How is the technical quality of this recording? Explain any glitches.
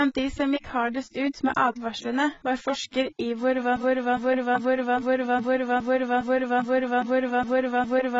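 The recording has poor technical quality. The whole clip carries heavy codec damage, and from 3.76 s to the end the audio is stuck in a repeating loop.

Across the entire clip there is AAC compression damage. The speech sounds dull and smeared, with nothing above 7.6 kHz. This is most likely AAC-LC coding at a very low bitrate, which fits something around 16 kbps. At that rate the encoder quantises the frequency lines against a hearing model. It lowers the cut-off and strips or approximates much of the upper spectrum, and the damage here is heavy.

At 3.76 s a broken-record loop begins and runs to the end of the clip. A fragment of about 0.41 s repeats exactly, back to back, 11 times. The likely cause is a stall in the player, encoder or stream that kept resending the last fragment it held. Whatever should have played after 3.76 s is lost, replaced by the same stuttering piece of audio.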